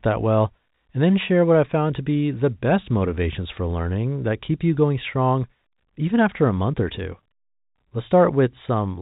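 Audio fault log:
No faults heard in this telephone-band speech recording.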